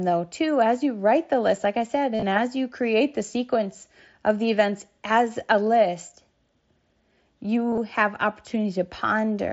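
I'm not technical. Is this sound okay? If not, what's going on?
No, there are two brief glitches, at about 2.15 s and 7.71 s. Both are concealed Bluetooth headset packet loss. Bits of audio went missing between the headset and the phone, and the phone patched each gap by repeating what it had just received. That leaves a short buzzy, slightly warbly blip lasting just under a tenth of a second.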